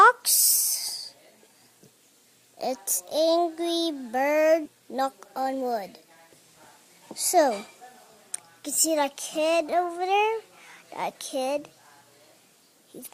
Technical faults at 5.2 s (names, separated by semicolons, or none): jitter buffer speed-up